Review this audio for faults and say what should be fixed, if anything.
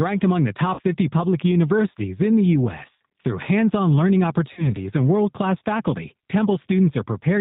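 The whole clip carries G.729 codec damage, plainly audible. Nothing above 4 kHz survives, and the speech has a rough, synthetic edge from being rebuilt out of a vocal tract filter and a few pulses per frame, which fits an 8 kbit/s codec. Plain band-limiting would sound dull but clean; this roughness sets it apart. To prevent it, negotiate a wideband or higher-rate codec for the call.

VoIP packet loss concealed by the speech codec occurs at 0.74 to 0.81 s after "among the", at 2.97 to 3.01 s after "public universities in the", and at 4.53 to 4.68 s after "on learning", before "and world class faculty". Each gap spans about 40 ms, which points to two 20 ms packets lost. The decoder stretches its last pitch and filter into a buzzy tone or coloured noise that fades, and the voice stays weak briefly afterwards. A dropout would go silent or click instead. To prevent it, reduce network loss or add forward error correction and a larger jitter buffer.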